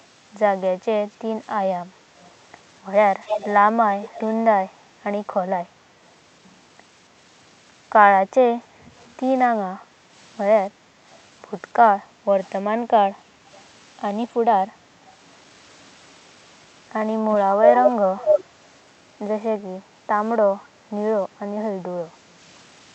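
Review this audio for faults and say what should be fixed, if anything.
Echo leak at 2.19–4.21 s, 11.11–15.15 s and 17.36–18.68 s: a copy of the speech returns 277 ms late, likely loudspeaker sound the far end's echo canceller missed. It is fairly quiet at first, barely audible in the middle and as loud as the speech at the end. Use headphones at the far end, or give its echo canceller a correct delay estimate and enough time to converge.

Background gated by the echo canceller, 9.74–12.25 s: while the loudspeaker plays, the canceller pushes the microphone down by up to about 8 dB, so room sound dips for under a second in total. Tune the canceller's suppression to be gentler, or add comfort noise so the background stays steady.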